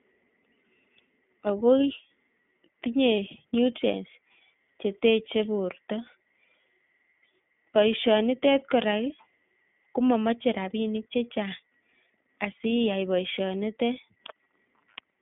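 From start to finish the speech runs through an iLBC codec, passing only about 200 Hz to 3.4 kHz, so it sounds thin and telephone-like. Each 20 ms frame's excitation is coded on its own, which fits the 15.2 kbps mode, and the damage is plainly audible as a rough, slightly synthetic quality. That grainy texture is what separates it from simple band-limiting, which would dull the sound without adding roughness.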